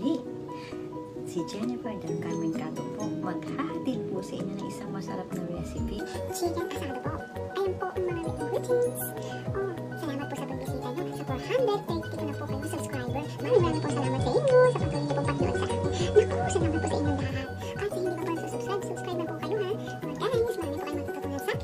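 From 5.99 s to the end, a section at the wrong speed, likely from playback against the wrong clock, runs 1.53 times too fast, lifting pitch by roughly seven semitones and hurrying everything. Between 13.43 and 17.35 s, digital radio blending to analogue: the receiver loses the digital stream and cross-fades over 172 ms to FM. Faint hiss rises, and the level shifts by about 5 dB.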